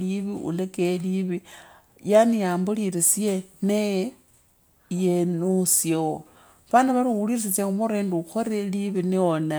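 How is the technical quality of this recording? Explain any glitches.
The technical quality of this recording is sound, with no glitches to explain.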